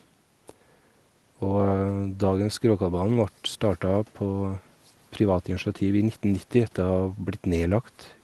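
No technical faults detected.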